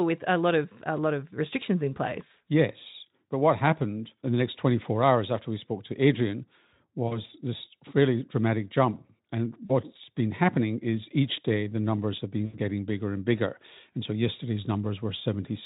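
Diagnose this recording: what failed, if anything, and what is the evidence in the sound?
Network: VoIP packet loss concealed by the speech codec at 7.07–7.20, 9.65–9.71 and 12.46–12.57 s. The gaps are extrapolated into a buzzy tone or a coloured noise that fades, which shows as decaying envelopes.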